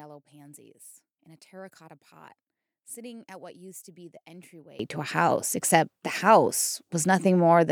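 From the start to 4.79 s, the speech nearly vanishes when heard in mono, dropping by about 24 dB and leaving only a faint residue of the voice. The centred body of the sound is gone, and full level returns only after 4.79 s. The likely cause is one channel inverted: with one side's polarity reversed, everything common to both channels cancels on summing, so only their small differences survive.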